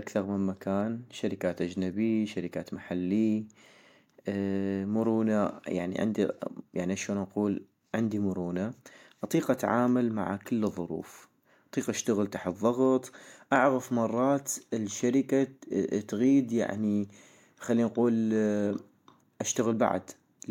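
From 0.16 s to 20.46 s, the speech carries clock slip clicks. A faint tick repeats about every 0.07 s, some 14 times a second. Heard together, they form a soft rattle under the voice. There are roughly 300 of them. Each marks one sample dropped or repeated. The likely cause is two devices running on unsynchronised clocks. Their rates differ by around 400 ppm, so a whole sample of error builds up quickly.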